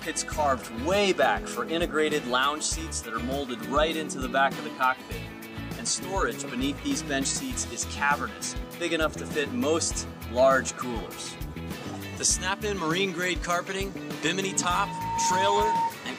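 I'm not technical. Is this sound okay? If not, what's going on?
No. Near the end, from 14.48 to 15.97 s, there is a loudspeaker feedback squeal. A microphone picked up its own speaker and looped it. One high tone, about 918 Hz, swells over under a second until it's louder than everything else.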